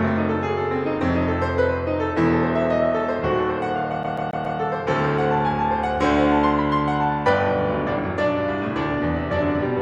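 From 4.03 to 4.59 s the music sticks like a CD stuck on one turn. A scratch keeps throwing the laser back one track. The same 138 ms slice plays four times over. A brief mute marks each jump. The result is a fast, even stutter.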